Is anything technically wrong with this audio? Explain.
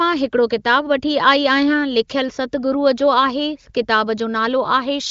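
No, nothing stood out on listening to this speech clip, which comes through an AMR wideband (HD Voice) connection at a high rate, as expected with no content above about 7.5 kHz.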